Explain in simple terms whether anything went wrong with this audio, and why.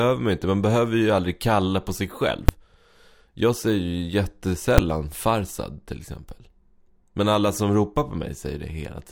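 Something did go wrong: the speech is hit twice by invalid numbers at full scale. At 2.49 s, right after "kalla på sig själv", and again at 4.78 s, just before "farsad till exempel", a calculation broke down and produced values that got pinned to the loudest possible level for about 5 ms. Because each block is so short, you hear it as a single sharp bang, not a gap, and the speech at those two moments is replaced by it.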